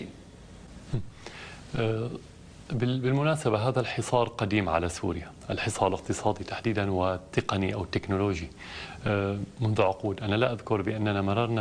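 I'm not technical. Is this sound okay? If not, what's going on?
Yes, nothing in this sound seems wrong.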